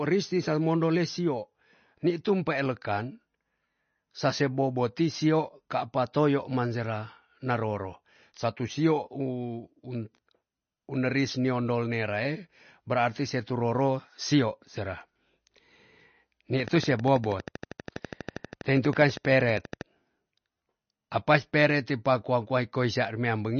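Throughout, the speech has the watery, swirling quality of MP3 compression. Weak frequency components flicker on and off from frame to frame, and nothing remains above 6.5 kHz. The damage is plainly audible and likely comes from a low bitrate, which fits around 32 kbps. The churning within the band sets it apart from a simple treble cut.

From 16.60 to 19.82 s, a train of clicks ticks over the speech at a regular 12.5 per second. There are roughly 40 similar pulses, standing about 10 dB above the signal. Their steady spacing and matching shape distinguish them from random crackle. Interference from nearby equipment, or a faulty connection or power supply, is the likely source.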